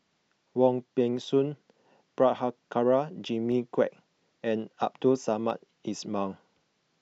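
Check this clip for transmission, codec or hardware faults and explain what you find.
Three sharp clicks stand out in this speech clip, at 1.17 s, 3.52 s and 5.50 s, and they point to dropped samples. Each is likely a tiny gap, a small fraction of a millisecond, missing from the stream. The waveform leaps straight to a later value, with a visible step rather than a smooth curve. No speech is lost, but each step is heard as an abrupt tick and shows on a spectrogram as a thin vertical line spanning all frequencies.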